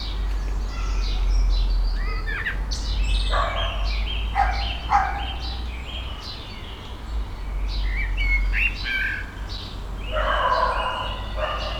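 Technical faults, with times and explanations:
9.57 s, underrun with held sample: the output buffer ran empty, so the converter held its last value for 5.7 ms, flattening the sound before it resumes softly with nothing skipped.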